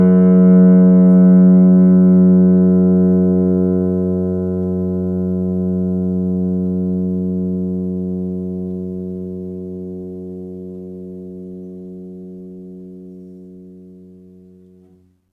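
A recording of sounds, with no technical fault to be heard anywhere in it. Nothing in the audio calls for a time or a cause.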